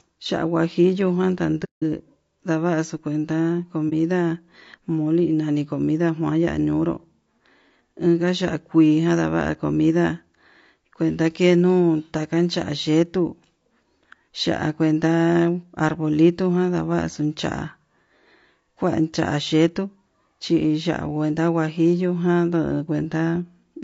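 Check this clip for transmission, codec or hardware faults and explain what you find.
Two faults are present: a constant codec roughness and two brief muted gaps.

Throughout, the speech sounds rough and grainy, with noise between the harmonics and a dull top band. This is likely low-delay AAC compression, consistent with AAC-ELD at around 32 kbps.

From 1.64 to 1.83 s, and again from 3.89 to 3.93 s, the sound fades softly down and back. This is AAC frame loss with muting. The decoder zeroed the missing frames, and its overlapping windows smoothed the edges. The longer gap fits several lost frames, the shorter one a single frame.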